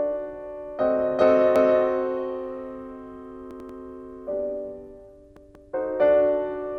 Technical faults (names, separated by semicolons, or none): repeated frames